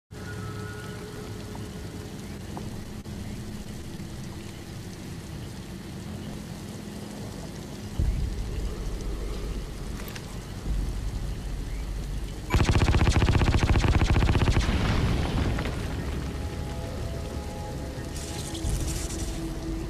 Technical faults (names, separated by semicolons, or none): processor overload crackle; scattered short gaps